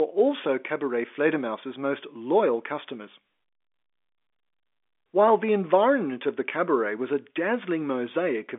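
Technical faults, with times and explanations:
Nothing stood out on listening to this speech, which comes across with the narrow band of an ordinary telephone line, with nothing heard above about 3.7 kHz.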